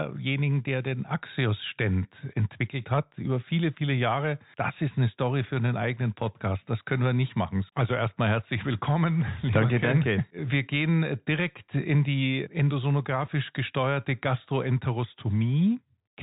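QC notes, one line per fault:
No faults found; the speech carries the narrow telephone band expected of G.711 telephone coding, with nothing above 3.8 kHz.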